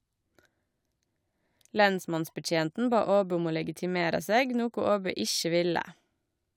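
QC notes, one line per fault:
Nothing stood out on listening to the speech.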